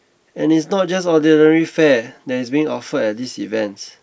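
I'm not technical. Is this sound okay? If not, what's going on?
Yes, nothing in this speech recording stood out as a problem when I listened to it.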